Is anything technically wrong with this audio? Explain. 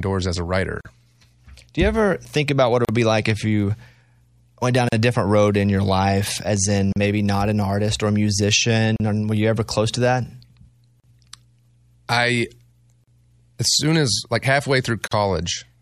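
Yes. Gaps at a join of encoded pieces occur every 2.0 s, at 0.81, 2.85 (after "think about what it"), 4.89 (after "went down"), 6.93, 8.96, 11.0, 13.04 and 15.08 s. Each piece was encoded separately, and the encoder's start delay and end padding were left in. The result is a gap of 43 ms, then 38 ms, with smeared edges. Unlike a packet dropout, the gaps fall at an exact regular interval and the speech resumes where it stopped, with nothing missing.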